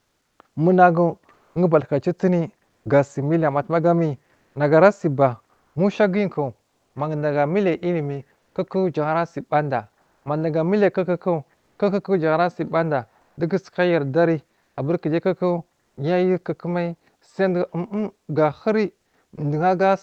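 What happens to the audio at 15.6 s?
At 15.6 s the audio is inside a stretch of sound chopped by the voice detector, from 13.21 to 15.97 s. Sending likely switched on and off under Opus DTX, replacing 500 ms of quiet sound with comfort noise, so it turns choppy.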